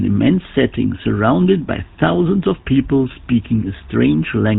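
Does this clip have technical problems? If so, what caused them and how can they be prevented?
Yes. GSM full-rate codec damage runs throughout: the pulse-driven vocal-tract model sparsely samples the excitation and drops everything above 4 kHz, giving plainly audible buzzy, gravelly speech, which fits 13 kbps. Prevent it by recording or transmitting through a wideband codec rather than GSM telephony.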